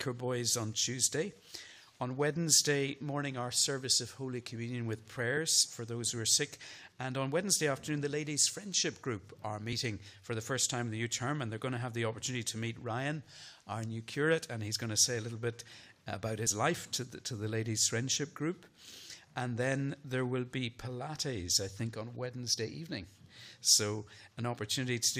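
Damaged data in a compressed stream appears twice, at 9.72 s and again at 16.46 s. In each spot a stretch of the encoded stream was corrupted, so the decoder could not read the frames there and lost sync until it locked onto the next valid frame header. What reaches the ear is a very short, glitchy blip, lasting only about 12 to 14 ms, that breaks into the surrounding sound and then clears.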